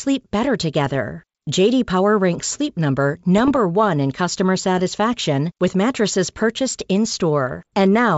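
Speech carried over a G.722 wideband call at 64 kbit/s has bit errors on an ADPCM link at 0.86–0.95 s, 3.38–3.58 s and 7.48–7.69 s, heard as pops and rough bursts. Each flipped bit derails the decoder's step size and predictor, which fits an error rate of a few tenths of a percent.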